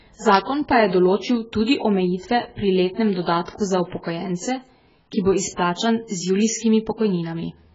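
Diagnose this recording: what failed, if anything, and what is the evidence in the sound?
Codec stage: AAC compression, likely at a very low bitrate near 12 kbps. The whole speech clip stops at 7.6 kHz and sounds dull, smeared and warbly.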